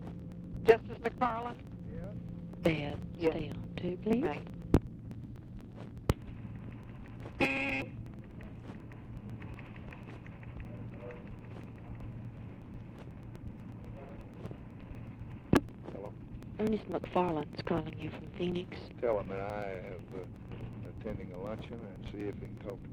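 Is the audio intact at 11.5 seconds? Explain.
No. From 0.07 s to 22.82 s, a background task stalls the USB bus or audio driver every 0.123 s, so 11.5 s falls inside a run of periodic USB or driver dropouts. Each stall skips about 2 ms of audio outright, with no silence filling the gap, across roughly two hundred losses. The sound jumps forward at each one, leaving an evenly spaced train of ticks that are audible only where there is signal.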